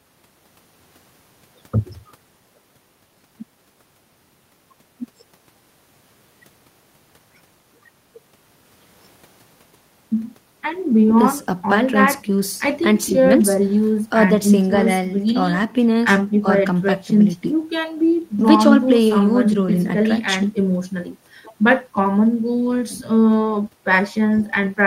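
Nothing goes wrong anywhere in this recording, so there's no fault to point to at any moment.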